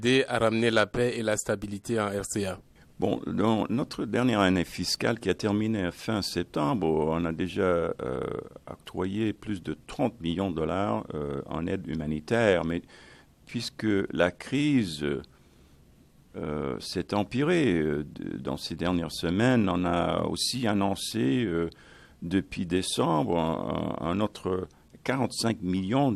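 Nothing here sounds wrong at any point, so there's no technical fault to point out in this one.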